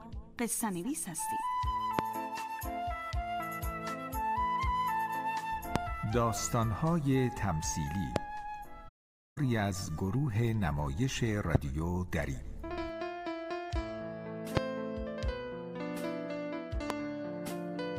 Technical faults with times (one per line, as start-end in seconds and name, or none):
1.99-2.01 loud pop
5.76-5.78 loud pop
8.16-8.19 loud pop
8.88-9.38 AAC frame loss with muting
11.55-11.57 loud pop
14.57-14.60 loud pop
16.90-16.93 loud pop